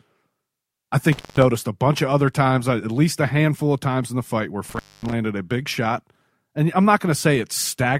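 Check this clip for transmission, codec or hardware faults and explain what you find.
Intermittent contact drops out the speech twice, from 1.12 to 1.43 s and from 4.69 to 5.12 s. A loose cable or plug briefly opens the signal path, for about 180 ms and then about 240 ms. The speech vanishes with crackle at each edge, leaving faint hiss while the line is open.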